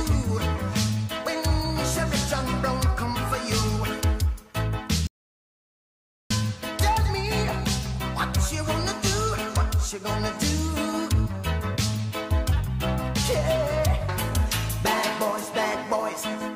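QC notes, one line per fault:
5.07–6.30 s: audio dropout to silence. The sound cuts off abruptly mid-flow and returns just as abruptly after 1.23 s of complete silence with no room tone, unlike a gate or fade, which would taper. This is likely a lost input while recording continued writing silence.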